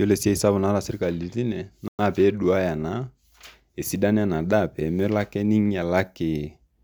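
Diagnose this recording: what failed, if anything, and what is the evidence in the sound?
Playback side: the speech drops to silence from 1.88 to 1.99 s, about 110 ms, then resumes, likely a Bluetooth stall where the headphone buffer ran dry.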